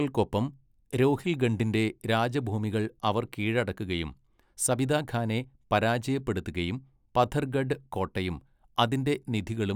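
No technical faults can be heard anywhere in this recording of speech.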